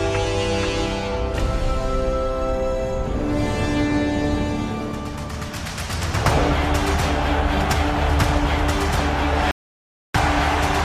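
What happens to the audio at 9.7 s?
An audio dropout to silence runs from 9.51 s to 10.14 s, so 9.7 s falls inside it. The sound cuts off abruptly and returns just as suddenly about 0.63 s later, and the gap between is silent with no room tone or background remaining. This is likely an input that briefly lost its signal, with the recorder carrying on and writing silence, so whatever occurred in that stretch is missing.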